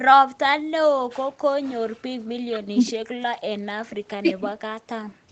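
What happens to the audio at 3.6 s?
Nothing goes wrong at 3.6 s: the speech passes through intact, carrying only the ordinary band limit around 8 kHz of the call path it was sent over.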